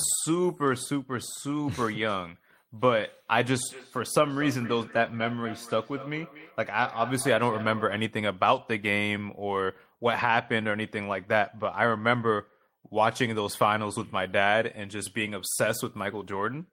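Feedback echo between two devices from 3.68 to 8.17 s: a second device replays the speech into the microphone, so each word returns about every fifth of a second, about 15 dB down.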